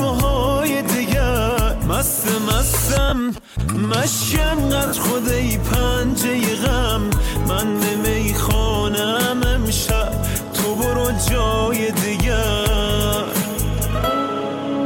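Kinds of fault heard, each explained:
Lost LE Audio frames: Frames from the Bluetooth LE Audio link went missing. The LC3 decoder filled each gap by repeating the last spectrum with randomised signs. Tonal parts turn into a brief noisy smear. Gaps occur at 3.09 to 3.12 s, 4.87 to 4.93 s, and 7.16 s. They last 30 ms, 60 ms and 10 ms, which fits a 10 ms frame size. The longest gap is too short to fade far.
GSM signalling bursts: A nearby 2G phone sent short groups of radio bursts while signalling to its network. The audio circuitry rectified that radio energy into sound. From 3.29 to 4.24 s there is a galloping dit-dit-dit of short buzzes. The buzz repeats at about 217 Hz. It sits roughly 15 dB below the wanted sound. Light codec coding is present throughout.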